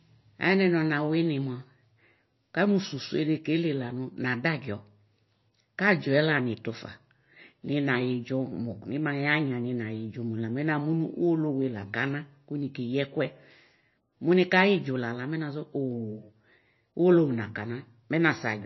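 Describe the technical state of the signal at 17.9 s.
At 17.9 s, as throughout, the speech sounds watery and swirly with nothing above 5.8 kHz, likely MP3 compression starved of bits and cutting treble, consistent with roughly 25 kbps.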